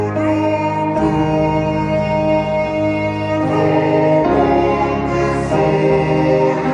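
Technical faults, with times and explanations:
Throughout, wrong sample rate: sound plays at two-thirds speed and about 7 semitones lower, consistent with 48 kHz audio played at 32 kHz. Tempo and pitch drop together, unlike a pitch shift.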